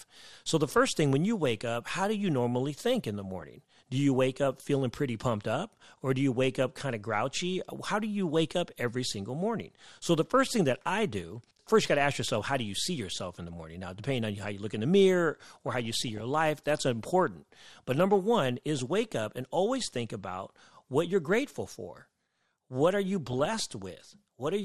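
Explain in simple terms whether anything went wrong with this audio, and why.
MP2 compression runs through the whole speech clip, which sounds dull and plainly gurgly. The likely cause is MPEG Layer II coding at a low data rate: it splits sound into many frequency slices and, lacking bits, drops the highest ones and stores the rest roughly.

DAB burbling appears at 2.95 to 3.43 s, 5.64 to 5.98 s (after "up feeling pretty pumped"), 15.55 to 16.21 s (after "look in the mirror"), around 18.7 s, and 23.27 to 24.19 s (after "for what are you"). Weak reception let errors into the data, putting short blips of noise into single frequency slices, so it burbles.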